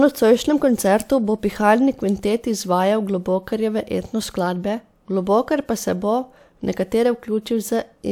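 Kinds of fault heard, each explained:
No technical faults heard.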